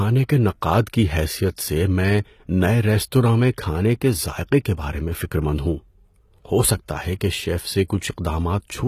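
Across the whole recording the speech carries plainly audible codec damage, likely HE-AAC compression at a rate around 20 kbps. The treble reaches high, yet its harmonics fail to line up with the lower band, so sibilants turn gritty and metallic rather than simply dull. Nothing survives above 14.9 kHz.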